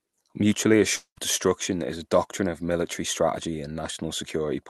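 A long network dropout interrupts this speech clip from 0.95 to 1.18 s. Its likely cause is lost packets: the receiver stretches the last sound into a fading buzz or hiss for about 0.2 s, then about 90 ms of silence follows before audio resumes at "destruction is a doctrine", with the missing stretch never recovered.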